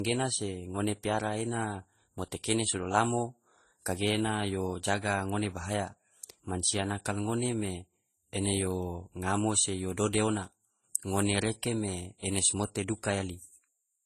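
Speech with transcoding between lossy codecs throughout: two layers of artefacts sit together, with nothing above 14.1 kHz. That layering is what separates it from a single low-bitrate encode. It likely came from a low-rate MP3 re-encoded to low-rate Vorbis.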